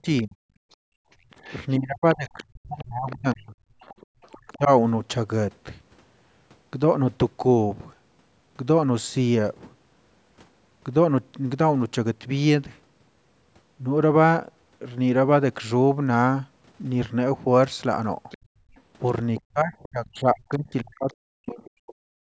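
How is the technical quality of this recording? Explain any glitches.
The recording has clear echo-cancellation trouble in two stretches, near the start and from about 18 s to the end. Content tops out at 8 kHz.

Speech suppressed in double talk, at 0.01–0.36 s, 1.78–4.7 s and 19.48–22.22 s: the canceller likely mistook overlapping talk for echo and ducked the speech by up to about 40 dB. The waveform shows sudden dips, and the spectrogram shows speech energy blanking out in patches.

The other side's voice leaking through, at 0.17–4.57 s, 18.3–20.09 s and 21.11–21.7 s: a faint second voice, about 20–30 dB below the talker, likely loudspeaker echo the canceller missed. It appears as extra harmonic traces on the spectrogram.

Background gated by the echo canceller, at 0.64–1.31 s and 18.38–18.76 s: the room tone drops by about 28 dB and then about 23 dB while the loudspeaker plays. On the spectrogram the noise floor goes briefly dark, and the waveform's low-level background dips.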